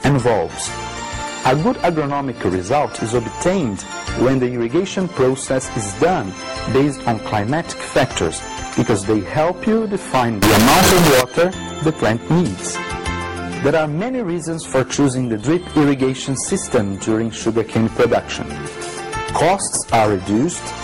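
From 10.42 to 11.21 s, 32-bit float samples were likely read as 32-bit integers (float read as integer), turning the audio into a loud, harsh, near-square waveform.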